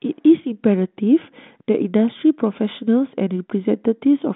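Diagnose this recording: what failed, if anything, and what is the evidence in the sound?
Nothing has failed: the speech sits in a telephone band of 150 Hz to 3.5 kHz, consistent with a G.726 ADPCM link working normally at 32 kbit/s, and the light coding grain on it is what that rate ordinarily leaves behind.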